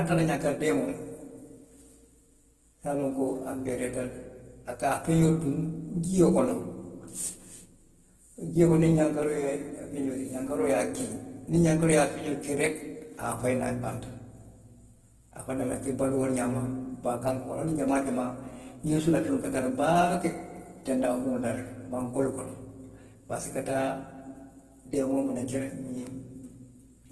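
Across the whole recording the speech has a rough, grainy texture, and nothing reaches above about 12.2 kHz. The damage is plainly audible. This is likely Opus compression in its music-oriented CELT mode, at a bitrate that fits roughly 16 kbps. There the encoder keeps each band's energy but refills starved bands with folded or noise-like content, so detail becomes grain.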